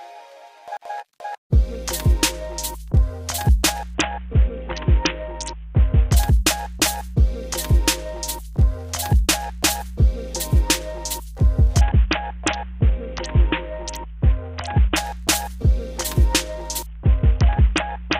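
A recording of sounds turns dull and gritty from 3.94 to 6.12 s, 11.81 to 14.96 s, and 16.86 s to the end: a Bluetooth SBC bit pool drop, which fits a fall to roughly 54 kbps that starves the upper sub-bands.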